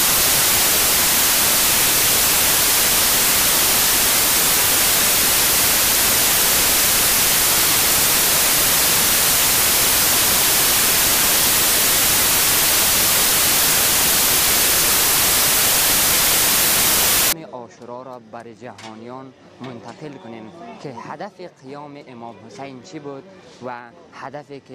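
Samples built from the wrong bytes run from the very start, 0.0 s, to 17.33 s: the decoder joins each sample's bytes incorrectly, off by one byte, in reversed order or on the wrong alignment, so the rapidly fluctuating low-order bits end up as the most significant part of every value. The result is loud, harsh broadband noise over the audio for that whole stretch, close to white on the louder sounds.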